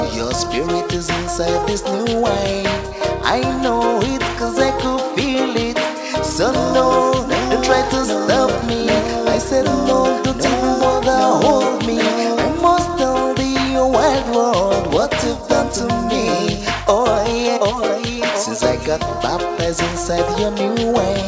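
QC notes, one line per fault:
Nothing stood out on listening; the audio carries the narrower, call-style sound of a WebRTC call path, with nothing above 8 kHz.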